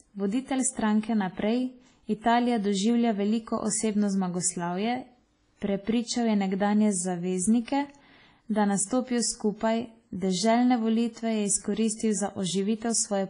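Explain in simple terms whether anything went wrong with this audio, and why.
The speech has a washy, ringing quality with a hiss that swells and fades along with the talking, and nothing above about 10 kHz, so it sounds dull. This is most likely WMA compression squeezed hard: the encoder discards fine detail and smears its leftover noise across each long chunk of sound.

At about 2.21 to 2.24 s there is pre-echo, a brief hiss lasting about 27 ms just before a sharp sound starts. The codec spreads the noise meant for the loud attack over the quiet moment before it, so the attack also sounds smeared.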